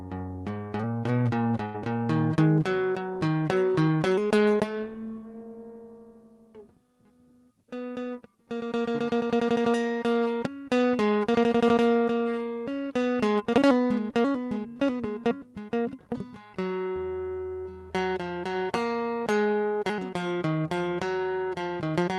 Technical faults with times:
1.65-1.78 burst of packet loss

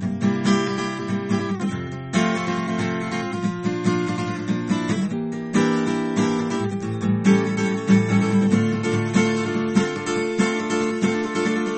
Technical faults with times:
0.00-11.78 MP3 compression

